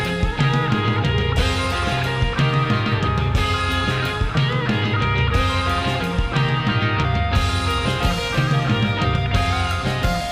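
Nothing stood out as a technical problem on listening to this audio.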